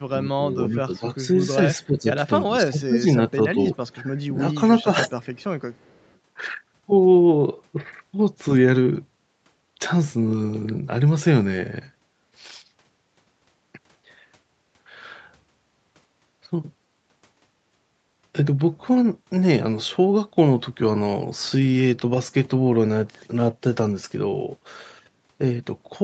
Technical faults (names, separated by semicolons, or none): speech suppressed in double talk; echo leak